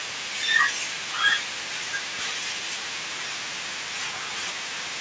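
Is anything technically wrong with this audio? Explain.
No, nothing is technically wrong with this speech recording. It has clearly passed through a call's microphone processing, which trims away the lowest bass and leaves nothing above 8 kHz, as that path normally does.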